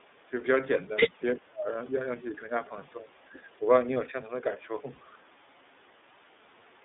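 From start to finish the speech carries the iLBC codec's narrowband coding: nothing below about 250 Hz or above 3.6 kHz, and a slightly rough, synthetic edge. A spectrogram shows a flat ceiling near 3.6 kHz, which fits the line band; the codec runs at 13.33 kbps with 30 ms frames.

From 0.00 to 0.37 s the voice dips by roughly 10 dB in patches. From 0.84 to 3.65 s it sinks much deeper, up to around 30 dB, for about a second and a half in total. The likely cause is speech suppressed in double talk: the echo canceller confused the talker with far-end echo and attenuated both. The waveform envelope shows abrupt troughs.

At 4.95 s a single 30 ms gap is filled by the decoder repeating the last pitch cycle with added noise, a brief held-vowel smear typical of lost iLBC frames. Because frames decode independently, the voice is clean again right away. On a spectrogram it appears as a short stretch of frozen harmonics.

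From 6.78 s to the end, the background is gated by the echo canceller. The room sound drops about 5 dB for roughly 70 ms, visible as a small step down in the noise floor of the waveform.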